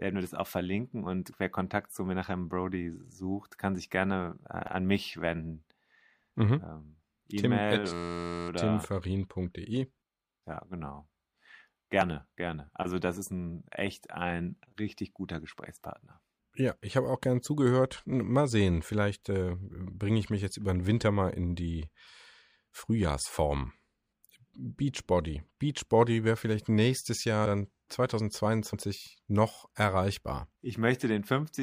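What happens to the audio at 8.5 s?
At 8.5 s a system hang loop is just ending. From 7.93 to 8.49 s one 11.6 ms slice of speech repeats 48 times, which fits a 512-sample buffer, making a steady 86 Hz buzz rather than a stutter or dropout. Almost nothing is lost.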